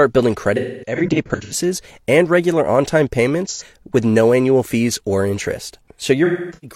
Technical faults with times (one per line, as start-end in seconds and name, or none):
0.56-1.53 AAC frame loss with concealment
3.47-3.62 AAC frame loss with concealment
6.24-6.76 AAC frame loss with concealment